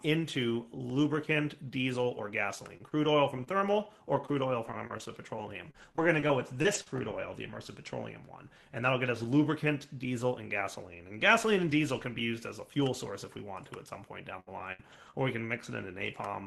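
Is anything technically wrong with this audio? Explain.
Yes. There are two kinds of fault: one DC step and two stretches of repeated packet loss. They sit on top of a call path whose coding noise and top end near 12 kHz fit Opus at around 24 kbps.

At 0.90 s a DC step appears. The waveform's zero line jumps suddenly and then drifts back slowly, as a very low high-pass around 2 Hz would pull it. It is heard as a single low thump while the sound carries on untouched. Unlike an ordinary dropout, nothing is missing from the audio. Only the baseline moves.

From 2.77 to 6.88 s the audio shows repeated packet loss, giving it a robotic sound. Fifteen short holes, none longer than 39 ms, are each patched by stretching the last bit of sound. That totals roughly half a second rebuilt, about 8% of the stretch. The result is a choppy, robotic flutter. A plain dropout would leave silent gaps. Here the gaps are filled with continued material, and they recur rather than happening once.

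From 14.36 to 15.15 s the same fault returns more heavily. Three gaps, the longest 66 ms, cover about 19% of that span, with roughly 150 ms concealed. The patches are longer here, even though there are fewer of them.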